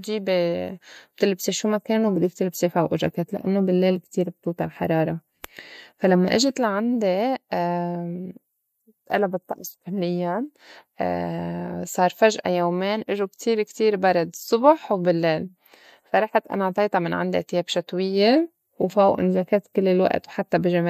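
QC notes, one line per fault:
Nothing to log: no faults heard anywhere in the speech.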